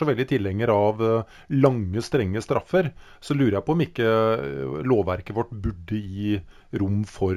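Throughout the speech there is imaging from linear upsampling. The sound appears to have been raised from a 16 kHz rate toward 44.1 kHz by joining samples with straight lines. That is a weak filter. The top of the original band is dulled. A faint mirror copy of the spectrum sits between 8 kHz and 16 kHz, roughly 40 dB below the signal. It adds a light metallic shimmer to sibilants.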